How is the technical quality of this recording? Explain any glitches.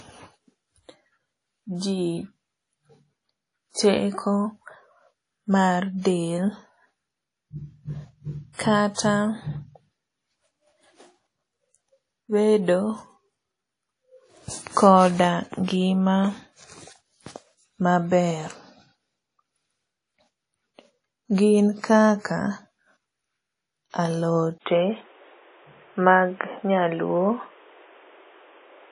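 The recording has audible problems throughout, with a further drop in quality near the end.

Throughout, the speech sounds washy and ringing, with a hiss that breathes with the voice and nothing above about 10.1 kHz. This likely comes from WMA compression at a low rate, around 32 kbps. Long transform blocks smear quantisation noise over tens of milliseconds, and weak spectral lines are dropped.

From 24.58 s to the end, the input switched to a poorer device. After a silence of 80 ms, the speech turns dull and boxy with nothing above 3.8 kHz. The level shifts by roughly 5 dB, and a new background noise sits around 35 dB below the speech. A change to another microphone or to a headset call profile is the likely cause.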